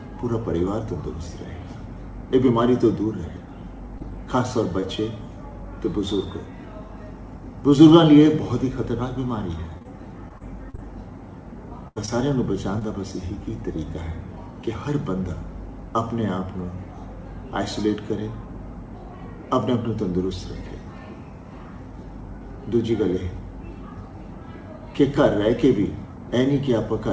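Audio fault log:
3.98, 4.80, 9.78 to 9.86, 12.06 and 12.79 s: short concealed packet loss. About 20 ms of audio each time just never showed up, so the receiver stretched the last sound over the hole and blended back. You get a quick smear or wobble. At 9.78 two of these land back to back.
10.28 to 10.80 s: repeated packet loss (robotic sound). Four gaps in half a second, the longest about 39 ms, roughly a fifth of the stretch patched in. Each fill barely settles before the next hole, so it turns choppy.
11.88 to 11.98 s: burst of packet loss. About 80 ms went missing in one go. The concealment holds the last sound and fades it as the gap drags on, giving a brief buzz or hiss, then the audio picks up further along with that chunk gone. Underneath all of this is the G.722 call path at 64 kbps, which tops out at 8 kHz.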